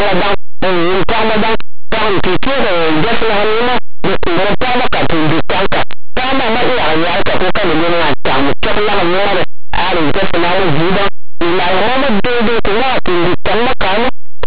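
Linear audio read as companded runs through the entire speech clip, from start to finish. The samples were written as plain linear 8-bit values but expanded as if they were mu-law codes. Tiny excursions just to one side of the midpoint map to the largest mu-law outputs, while those on the other side stay small, so even quiet passages come out very loud. The result is a harsh distortion.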